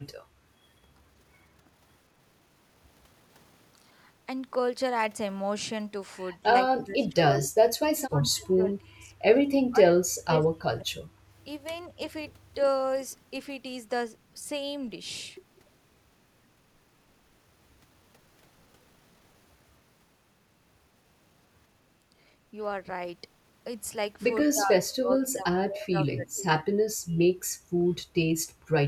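Speech dips sharply, by as much as roughly 30 to 35 dB, in five stretches: 6.77–7.6, 7.78–9.13, 9.7–11.02, 24.52–25.47 and 25.66–26.43 s. This is speech suppressed in double talk, likely an echo canceller turning this talker down along with the far-end echo while both sides spoke.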